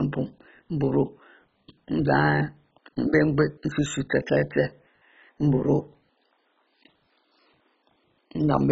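Throughout, the speech sounds dull and gurgling, with flickering granular distortion and nothing above 7.6 kHz, likely from heavy MP2 compression starving upper sub-bands of bits.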